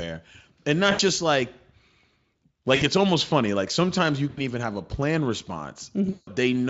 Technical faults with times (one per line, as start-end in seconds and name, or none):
0.91-1.01 VoIP packet loss concealed by the speech codec
2.75-2.83 VoIP packet loss concealed by the speech codec
4.29-4.42 VoIP packet loss concealed by the speech codec
6.09-6.30 VoIP packet loss concealed by the speech codec